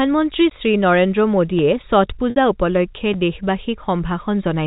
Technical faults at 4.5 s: none

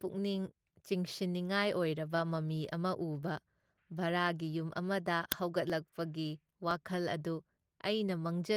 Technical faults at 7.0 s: periodic USB or driver dropouts

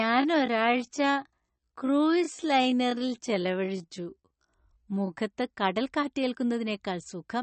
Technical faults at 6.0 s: MP3 compression

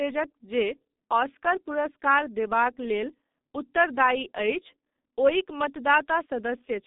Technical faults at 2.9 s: G.723.1 codec

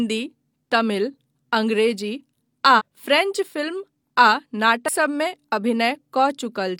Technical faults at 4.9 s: damaged data in a compressed stream

